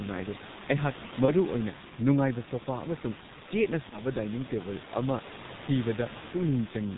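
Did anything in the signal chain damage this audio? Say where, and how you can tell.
Yes. At the codec stage, heavy G.723.1 coding muffles the speech throughout. Nothing passes above 4 kHz, consonants blur, and the hoarseness fits a rate near 6 kbit/s.

At the network stage, VoIP packet loss concealed by the speech codec shows at 1.25–1.33 s and 3.89–4.01 s. Each gap fits one lost 30 ms frame, which the decoder stretched into a fading buzzy tone or coloured noise.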